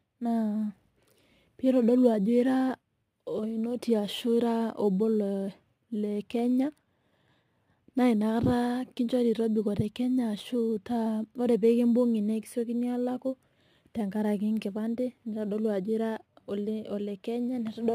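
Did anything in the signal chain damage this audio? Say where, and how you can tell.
Yes, crude rate conversion at the sample-rate stage, all the way through this speech. There's a gritty, inharmonic fizz riding on the louder and brighter syllables, roughly 35 dB down. That fits a 44.1 kHz to 48 kHz change done by repeating nearest samples without filtering.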